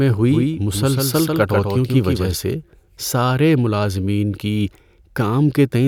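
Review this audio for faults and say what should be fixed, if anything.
A doubled audio track runs from 0.31 to 2.31 s, ending just before "سے سارے ملازمین کی": a dry, full-band copy of the speech trails about 150 ms behind, roughly 5 dB down, cutting in and out abruptly. Likely cause: a second, slower capture path. Route each source through a single capture path and mute monitoring returns.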